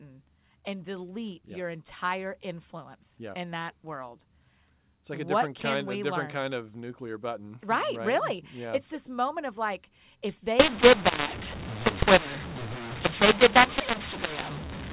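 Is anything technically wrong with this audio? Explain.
Yes. From 10.60 s, just after "moment of like if", to the end at 14.93 s, the clip shows a mu-law and A-law mix-up. The narrowband telephone audio was coded as A-law but is being decoded as mu-law. The two laws map 8-bit codes to different levels, so sample amplitudes come out scrambled. Some are too loud and others too soft, and near-zero samples are pushed well above silence. The speech turns harsh and distorted, and the gaps between phrases fill with noise.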